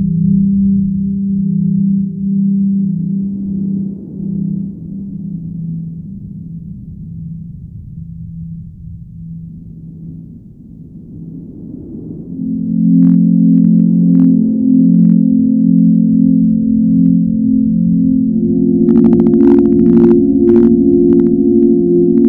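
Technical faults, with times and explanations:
Throughout, hard clipping: the loudest peaks pick up a brief crackle, heard only on a small fraction of the sound, well under one percent. They were driven about 3 dB past what a stage could pass. The tops were sliced flat, and that squared-off shape adds bright harmonics high in the spectrum.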